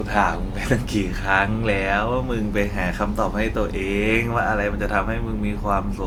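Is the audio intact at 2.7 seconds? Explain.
No. At 2.7 seconds, as throughout the clip, the speech carries generation loss, likely from being decoded and re-encoded with a lossy codec about three times, with a character that fits Opus at around 64 kbit/s. Each pass re-quantises the signal on a shifted frame grid, so the noise from earlier passes stacks up. The result sounds swirly, smeared and hollow beyond what that bitrate alone would give, with blurred attacks.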